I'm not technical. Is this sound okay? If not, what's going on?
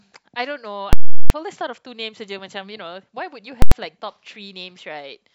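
No. A calculation in the audio processing failed and produced invalid numbers at full scale, pinning the output at its loudest level. From 0.93 to 1.30 s this causes a very loud pop, silence, then another pop. At 3.62 to 3.72 s the same happens in a single sharp bang.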